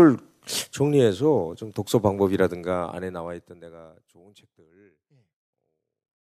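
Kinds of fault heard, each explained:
No technical faults are audible in this speech recording.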